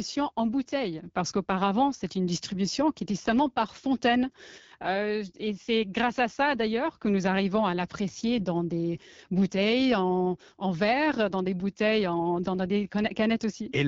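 From start to finish the speech carries the rough, raspy grain of the AMR wideband (HD Voice) codec, and the damage is plainly audible. The coder rebuilds the voice from a pulse-excited vocal tract model up to 6.4 kHz and fills the 6.4 to 7 kHz band with shaped noise. Here it has too few bits to do that cleanly, so voiced sounds come out gritty and buzzy, which points to one of its lowest modes, around 8.85 kbit/s.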